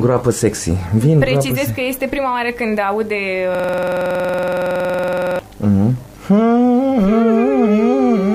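From 3.55 to 5.39 s the audio freezes into a system hang loop: one 46 ms fragment repeats exactly, giving a rough 21.5 Hz stutter that fits a 2048-sample buffer, unlike dropout concealment, whose repeats vary.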